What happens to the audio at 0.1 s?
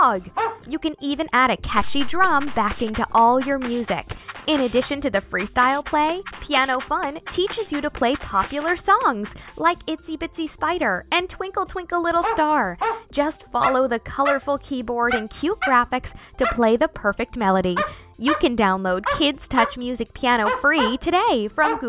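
Nothing goes wrong at 0.1 s; the audio is intact and continuous at that moment.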